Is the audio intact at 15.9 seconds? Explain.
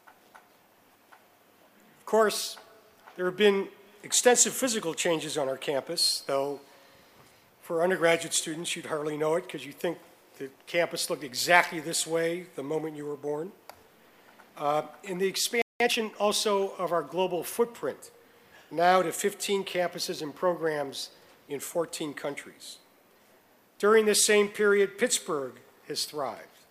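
No. At 15.9 s the audio is in a time-compressed catch-up that runs from 15.80 to 16.16 s. The player is clearing a backlog by cutting out small pieces and cross-fading across the joins. The result plays at 1.5 times normal speed for about 0.36 s. The pitch stays normal, so the sound is hurried rather than raised.

That backlog built up during the playback stall just before, from 15.62 to 15.80 s. The output goes silent for about 185 ms in mid-flow. The likely cause is that the player ran out of data or its thread was blocked. The catch-up begins as soon as the sound resumes.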